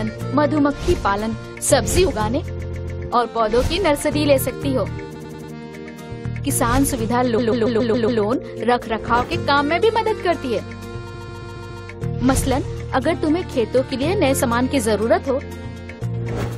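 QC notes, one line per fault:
2.59–3.01 s, 5.14–5.52 s, 7.37–8.21 s, 11.13–11.83 s: repeated frames. A short block of compressed audio plays again and again, so the sound stutters in place. The blocks are about 139 ms at the first, third and fourth (which fits six frames) and 93 ms at the second, and they replay 3, 4, 6 and 5 extra times, adding 0.42, 0.37, 0.84 and 0.70 s. Unlike a dropout, no audio goes missing or silent. The same slice simply returns, and the clip runs longer.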